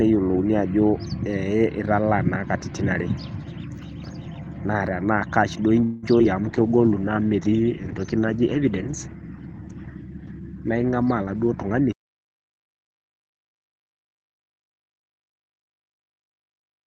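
Just after "kash duo", from 5.83 to 6.05 s, there is a call audio freeze. The last sound is stretched into a fading buzz or hiss for about 190 ms. This was likely a hold-up of packets that emptied the jitter buffer. Nothing is lost. The audio simply resumes late.

Two short concealed packet losses follow, at 6.19 to 6.21 s and 6.23 to 6.26 s. About 20 ms and then 40 ms of audio never arrived. The receiver patched each hole with a brief continuation of the prior sound. Each one is heard as a quick smear or wobble.

At 6.44 s a call bitrate drop begins. The encoder falls from 32 to 12 kbps and stays low for about 5.4 s, until 11.99 s. The audio band also shrinks from 20 kHz to 8 kHz. The sound turns muffled and rough.

Within that stretch, from 6.57 to 7.00 s, comes a jitter buffer slow-down. Pitch periods are repeated to add 53 ms of audio. Playback runs at 89% speed with unchanged pitch, so sounds drag.

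From 11.23 to 14.32 s, a jitter buffer speed-up trims about a fifth of a second. Short pitch-period pieces are cut to reduce the delay. The audio runs at 106% speed, still at the same pitch, and sounds a little hurried.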